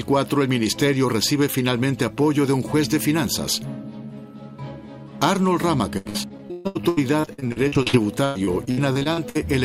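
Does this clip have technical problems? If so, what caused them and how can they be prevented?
Yes. From 5.97 to 9.37 s the sound turns choppy and robotic: repeated packet loss left frequent gaps, up to 133 ms, patched by extending earlier sound across about a third of the stretch. A more stable network connection and a larger jitter buffer would prevent it.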